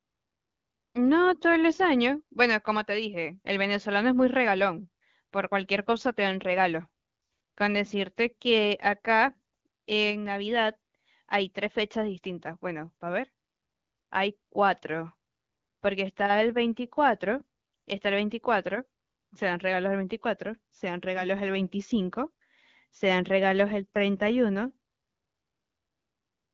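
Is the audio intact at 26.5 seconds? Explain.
Yes, the audio is intact at 26.5 seconds, with no fault at that moment.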